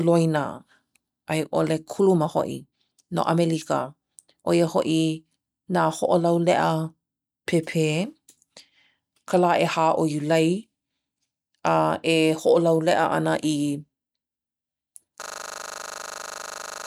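From 15.22 s to the end, a system hang loop replays one 40 ms slice exactly, 41 times, producing a steady 25 Hz buzz. The driver froze while the hardware kept cycling its buffer. Unlike a dropout or an irregular stutter, the sound neither stops nor varies.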